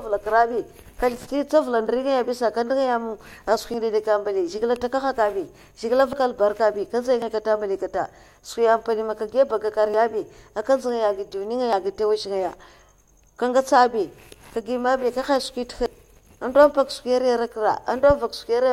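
At 3.74, 6.13, 7.22, 9.94, 11.73 and 15.86 s the speech jumps forward, each time losing a few tens of milliseconds, most likely a dropped buffer (overrun). Unlike a dropout, there is no silent gap, just an abrupt splice.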